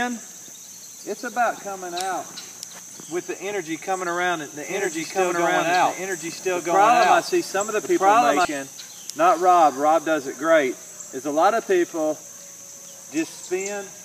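From 4.63 s to 8.45 s the clip carries a doubled audio track: a second, full-band copy of the same sound runs about one and a half seconds behind the original and at roughly the same level. It has no decay or room colour, and it cuts in and out abruptly at those two times. The likely cause is either a slower second capture path mixing the signal back in, or an edit leaving two copies out of step.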